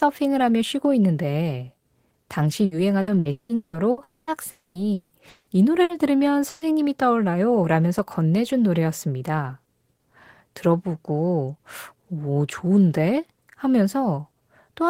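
A speech clip with network faults clustered between 2.65 and 6.64 s. Repeated packet loss makes the sound robotic from 2.65 to 4.00 s. Six gaps there are patched by extending the last sound, the longest 180 ms. Concealment covers about 44 percent of that span, so the speech turns choppy. Four longer holes follow at 4.03 to 4.30, 4.51 to 4.78, 4.93 to 5.14 and 5.29 to 5.50 s. Each becomes a held buzz or hiss, and the second ends in a brief silence. The sound returns with that stretch missing. A long network dropout is the likely cause. Two bursts of packet loss come next, at 5.83 to 5.92 s and 6.49 to 6.64 s. Each loses a short run of audio. The receiver fills the gap by fading out the last sound, then resumes further on.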